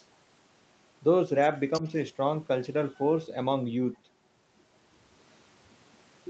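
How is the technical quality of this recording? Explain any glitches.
One glitch stands out, a brief stretch of the other side's voice leaking through, heard over speech whose high end stops at about 8 kHz, as a wideband call codec would leave it. From 1.73 to 1.87 s a faint second voice, roughly 15 dB below the talker, slips in. This is likely the far end's loudspeaker audio that the echo canceller missed. Unlike a crosstalk or a background talker, it is a copy of call audio.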